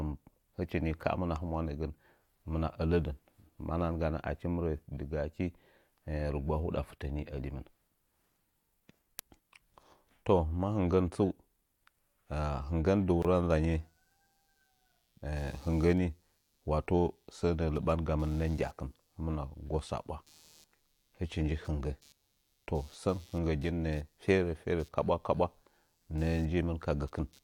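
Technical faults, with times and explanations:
13.22–13.25 s, gap at a join of encoded pieces: Right after "hinggən dɨ", the speech drops out for about 23 ms and then resumes where it stopped. Two separately encoded pieces were joined untrimmed. The encoder's start delay and end padding leave silence with smeared edges.
13.74–27.44 s, computer activity noise: A faint buzzing chirp, pulsing at around 150 times a second, sits about 35 dB below the speech until the end. It follows the computer's load, not the speech, because changing processor or graphics activity disturbs the audio circuit's shared ground.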